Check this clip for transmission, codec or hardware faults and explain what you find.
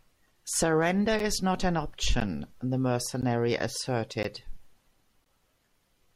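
The speech has one kind of fault, a gap between stream segments, heard five times at 1.19, 2.20, 3.22, 4.23 and 5.24 s, roughly once per second, which fits 1 s segments. Each boundary's timestamps leave a short hole that the player fills with silence, about 8 ms at first and growing to about 17 ms. Each gap sounds like a tiny hard-edged dropout or tick. No audio is lost. On a waveform each gap shows as a flat, near-silent notch, and on a spectrogram as a thin empty vertical stripe.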